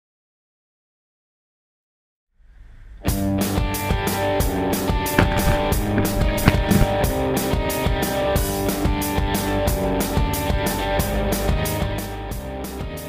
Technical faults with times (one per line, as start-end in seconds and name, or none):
11.73-12.17 zipper noise